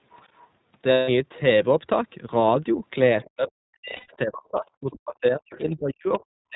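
The whole clip is speech through the iLBC codec at 15.2 kb/s in 20 ms frames. Nothing above 4 kHz survives, and the speech sounds audibly rough and synthetic.

From 0.11 to 0.47 s, a very faint second voice sits far below the talker. This is the other side's voice leaking through, likely from loudspeaker echo the canceller missed.

From 0.92 to 1.10 s, about 160 ms of lost iLBC frames become a held, buzzy vowel. That fits eight missing 20 ms frames. The voice recovers at once.

From 3.23 s to the end, the speech is suppressed in double talk. The level dips by up to about 40 dB, over roughly three seconds in total. The likely cause is the echo canceller turning down both voices while the far side talks.

At 3.25 s, a brief, faint scrap of the other side's voice leaks through.

From 3.96 to 4.16 s, more lost iLBC frames, about 140 ms scattered over 200 ms, leave short breathy held tones. 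The longest run is about 100 ms.

The other side's voice leaks through again, faintly, from 5.52 to 5.75 s. It returns slightly louder from 6.14 to 6.22 s.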